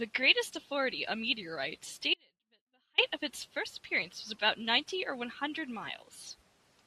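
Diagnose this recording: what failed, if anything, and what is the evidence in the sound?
The speech drops out abruptly at 2.14 s and returns at 2.98 s, a gap of about 0.84 s. This is an audio dropout to a faint residue. The gap is not silent. A faint sound stays, roughly 40 dB below normal level. Both edges are hard cuts, not a pause or a fade. The likely cause is an intermittent break in the analogue wiring, such as a loose connector, that left only a faint residue while the downstream path stayed live.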